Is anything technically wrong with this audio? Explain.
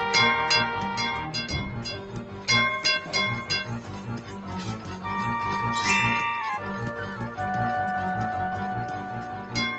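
Yes. A noise suppressor built for speech stayed active throughout the clip and treated parts of the sound as noise. Steady tones, ambience and decaying tails were pushed down while sharp onsets mostly got through. The gain it applies therefore keeps shifting, with level swings of around 10 dB. This gives the audio a pumping, fluttering quality and a thinned-out body. The band-limiting, with nothing above 8 kHz, fits the Opus call path at about 24 kbps.

In four places the same noise suppressor cut the sound harder than elsewhere: 1.95 to 2.48 s, 3.8 to 4.5 s, 4.78 to 5.04 s and 9.18 to 9.56 s. It misjudged these stretches as noise and pulled them down by about 6 dB in the deepest parts of the first, second and fourth, and about 5 dB in the third. Held or fading material sinks audibly there, and decays end early rather than ringing out naturally.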